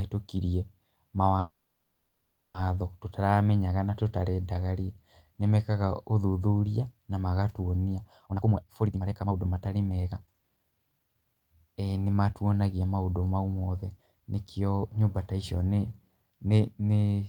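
At 1.39 s a call audio freeze begins, most likely because packets stalled in transit and the jitter buffer emptied. A brief fading continuation gives way to about 1.02 s of silence until 2.56 s. Unlike a dropout, the speech then resumes exactly where it stopped, nothing lost, just 1.15 s of added delay.

From 8.26 to 11.16 s a jitter buffer speed-up trims repeated pitch-period-sized slices, roughly a second in total, to work off excess buffered delay. Speech runs at 139% speed and sounds hurried, but unlike a faster playback rate, the pitch stays unchanged.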